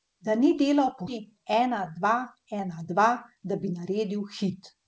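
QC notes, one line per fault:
1.08 s: skip ahead. Playback jumps forward with no gap, losing roughly 0.7 s of speech, and the two sides are joined almost directly. This points to the jitter buffer discarding queued audio. The waveform shows an abrupt seam; the spectrogram shows formants switching instantly.
1.17 to 3.81 s: jitter buffer speed-up. Speech runs about 8% fast at unchanged pitch and sounds hurried. Short pitch-period pieces, roughly 0.2 s in total, were removed to drain excess buffered delay. The spectrogram shows harmonics at normal spacing but compressed syllable timing.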